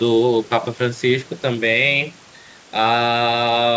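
No faults are audible in the speech; the absence of anything above 8 kHz is the expected limit of the call's microphone processing and of a wideband call codec such as G.722.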